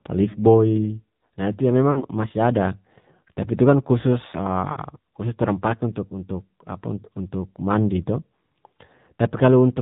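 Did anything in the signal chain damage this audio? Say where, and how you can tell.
Yes, at the codec stage and again over the radio link. The whole clip went through the AMR narrowband mobile codec: there's nothing above 4 kHz, and the speech has that buzzy, synthetic edge you get when a vocal tract model driven by sparse pulses is rebuilding the voice at low bitrate. The damage is plainly audible, and it fits AMR-NB's 7.4 kbps mode.

On top of that there are lost AMR speech frames at 0.30–0.42 s, 1.92–2.05 s and 4.72–4.77 s. Each gap is short and sounds like about 40 ms going missing, which fits two 20 ms frames that failed their checksum in transmission. The decoder fills each hole by repeating the last good pitch and vocal tract settings at falling gain, so you hear a brief warbly dip before the real audio picks back up.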